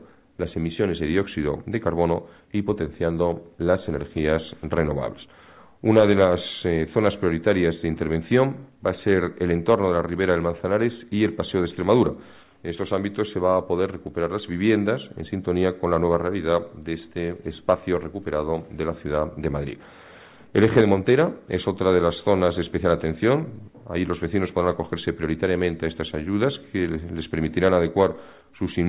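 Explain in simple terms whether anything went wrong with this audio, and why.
Nothing went wrong with this audio; there's no problem to explain.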